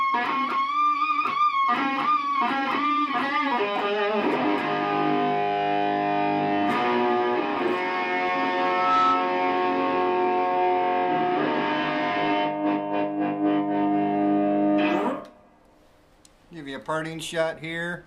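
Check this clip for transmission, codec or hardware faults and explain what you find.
One fault is present: a loudspeaker feedback squeal from 8.59 to 9.42 s. A microphone is picking up its own loudspeaker, and at 1.3 kHz the loop gain exceeds unity. That tone swells over about a third of a second into a squeal roughly 5 dB above the surrounding sound.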